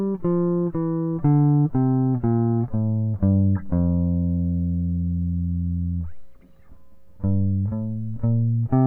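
Nothing goes wrong anywhere in this bit of music, so there's no fault to point to at any moment.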